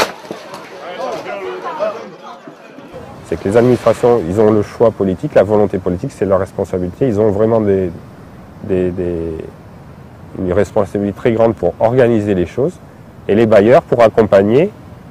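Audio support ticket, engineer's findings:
Hard clipping, peaks flattened at 3.56–4.87 s, 5.36–5.63 s, 7.21–7.56 s, 10.58–10.80 s, 11.26–12.05 s, 13.32–14.60 s. Overdrive about 1 to 6 dB; harsh fuzz on loud passages, lighter crackle near 7.2 and 10.6 s. Probable gain stage or converter driven past full scale.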